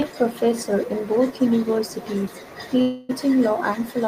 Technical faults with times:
2.81-3.11 call audio freeze

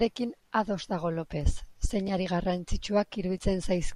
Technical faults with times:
2.07 chunks out of order

